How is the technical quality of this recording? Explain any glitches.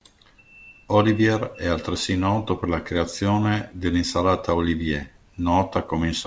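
No glitches or faults audible.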